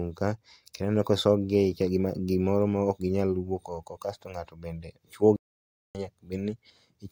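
At 5.36 s the speech cuts off mid-flow and the output stays completely silent until 5.95 s, a gap of about 0.59 s, before the sound resumes. This is a playback stall, most likely the player running short of buffered data or its audio thread being held up, so nothing reached the output. On a waveform it appears as a flat line with abrupt edges; on a spectrogram, a clean vertical blank band across all frequencies.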